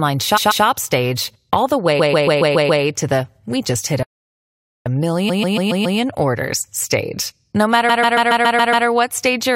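Repeated frames at 0.36–0.64 s, 1.99–2.82 s, 5.28–5.98 s and 7.88–8.86 s make this speech clip stutter. A block of about 0.14 s of compressed audio replays two, six, five and seven extra times. The doubled data stretches the clip by roughly 0.28 s, 0.84 s, 0.70 s and 0.98 s. A playback stall at 4.03–4.86 s cuts the sound to silence mid-flow for about 0.83 s, after which it resumes where it stopped. The likely cause is that the player ran short of data, or its thread was blocked, until it recovered.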